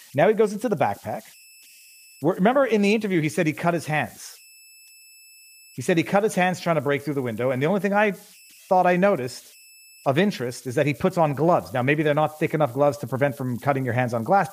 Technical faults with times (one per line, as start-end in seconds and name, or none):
0.00-14.52 converter idle tones